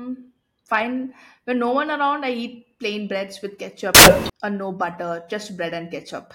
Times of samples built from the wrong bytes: 3.95-4.30

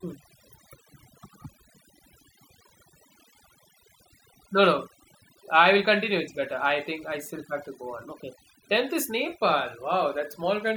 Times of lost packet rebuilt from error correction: none

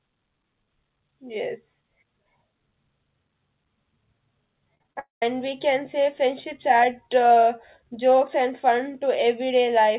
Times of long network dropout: 4.99-5.23

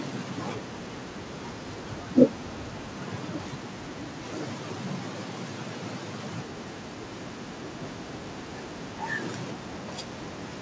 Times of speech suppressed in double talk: none

